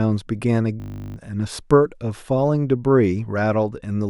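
At 0.8 s a system hang loop sets in: the computer or driver froze while hardware replayed one 20 ms buffer, giving a steady 50 Hz buzz until 1.16 s.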